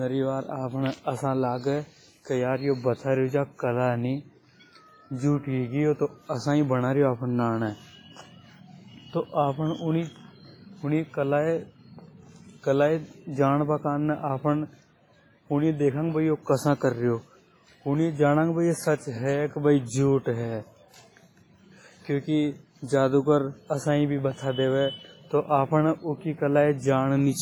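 All the way through, the speech rings and sounds washy, with hiss breathing along. That's heavy damage, likely from WMA compression at a low bitrate around 24 kbps.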